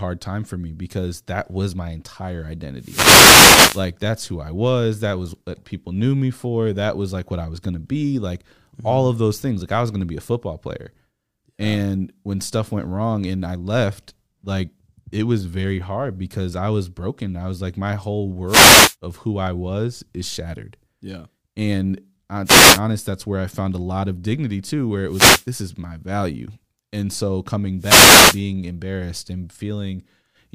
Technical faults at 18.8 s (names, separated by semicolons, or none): wireless microphone noise hit